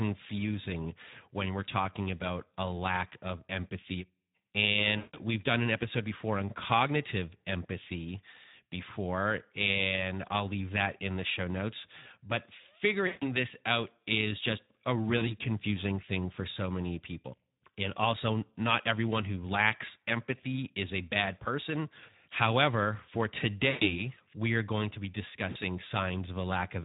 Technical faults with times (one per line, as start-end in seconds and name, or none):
0.00-26.84 Speex codec
4.97-5.19 VoIP packet loss concealed by the speech codec
13.07-13.26 VoIP packet loss concealed by the speech codec
15.17-15.35 VoIP packet loss concealed by the speech codec
23.69-24.00 VoIP packet loss concealed by the speech codec
25.49-25.57 VoIP packet loss concealed by the speech codec